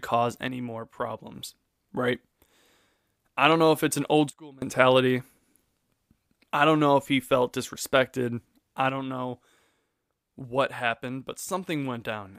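At 0.48 s the speech drops by about 6 dB and recovers at 1.35 s. After "if it's an old" it falls about 24 dB from 4.30 to 4.62 s. After "he felt disrespected I" it drops about 6 dB from 8.89 s to the end. Each sudden gain jump, likely an unramped gain change, shifts voice and background noise together as vertical steps in the waveform envelope and uniform darkening across the spectrogram.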